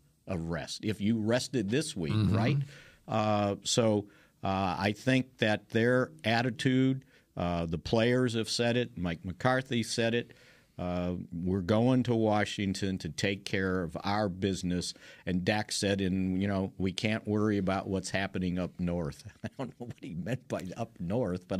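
No technical faults can be heard at any point in the speech.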